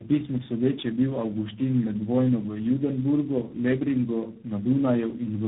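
From start to finish the speech sounds rough, muffled and warbly, with nothing above about 3.8 kHz. This is tandem speech coding. The call appears to have been decoded and re-encoded at each network boundary by three separate low-rate speech codecs, which fits a chain like G.729A, AMR-NB and finally G.726. Each coder had to model audio the previous one had already damaged, so their errors piled up.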